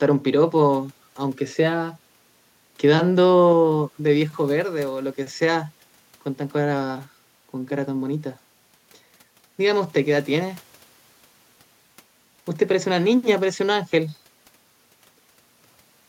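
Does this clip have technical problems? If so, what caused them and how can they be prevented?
No, nothing in this speech recording sounds off technically, so there's nothing to trace back or guard against.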